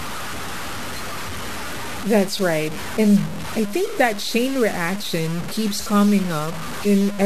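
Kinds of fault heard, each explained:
Low bit depth without dither: Grainy, gritty distortion runs through the speech and rises and falls with it, sitting only about 15 dB below the signal. Unlike steady hiss, it tracks the sound, and quiet tails drop away or sputter. The likely cause is truncation to roughly 5 bits.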